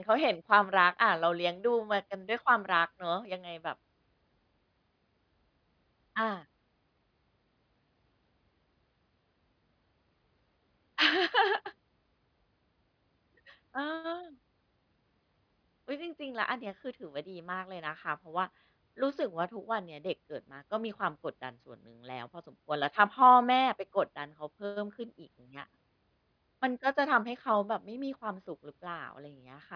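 Nothing technical stands out in this speech recording; there's no fault to point to anywhere along the way.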